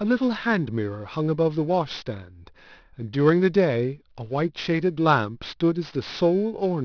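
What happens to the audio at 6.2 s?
Aliasing, and it runs through the whole clip, not just 6.2 s. Content above 5.5 kHz folds back down to wrong frequencies, which fits a resample to 11 kHz without a low-pass first. Sibilants get a gritty, metallic edge, with the folded junk roughly 25 dB below the speech.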